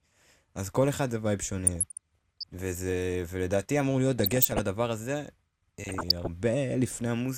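DAB burbling hits the speech at 1.67 to 2.45 s, 4.18 to 4.59 s and 5.84 to 6.27 s. Residual bit errors corrupt sub-bands, causing short blips of noise in single sub-bands.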